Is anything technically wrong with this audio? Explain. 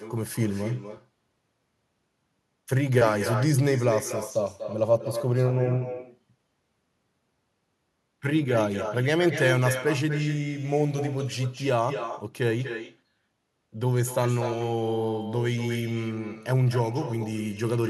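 Yes. Throughout the speech there is echo with no canceller. The far end appears to be playing the call over a loudspeaker, and its microphone picks that sound up and returns it over the network without any echo cancellation. As a result, every phrase is followed about a fifth of a second later by a copy that is about 10 dB quieter and sounds thinner. Room reverberation would decay smoothly from the original. Here the copy arrives as a distinct, delayed repeat.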